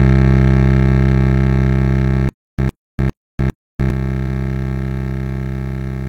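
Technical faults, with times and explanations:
2.29–3.90 s, stutter with silent gaps: a 105.6 ms fragment of the music plays four times, each followed by 297.55 ms of digital silence, repeating every 403.15 ms. The likely cause is a stalled player replaying its last buffered fragment at each retry, so the intervening music is lost.
4.23–4.28 s, repeated frames: a 46.4 ms block of music plays twice in immediate succession, heard as a brief stutter that lengthens the audio by 46.4 ms. The duration points to a single compressed frame that was written or sent twice and decoded again.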